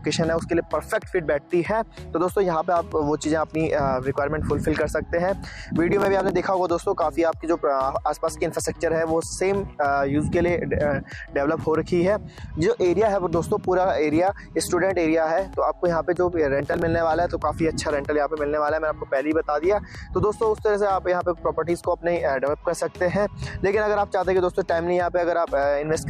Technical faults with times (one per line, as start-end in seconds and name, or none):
5.89-6.38 processor overload crackle
16.60-16.82 processor overload crackle